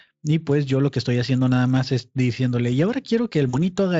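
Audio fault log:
3.49 to 3.56 s VoIP packet loss concealed by the speech codec: a short buzzy or noisy, fading smear as the decoder extrapolates across 40 ms, which fits two lost frames.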